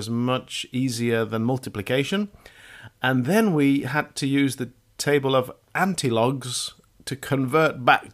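No technical fault can be heard anywhere in the recording; the signal stays continuous and steady throughout.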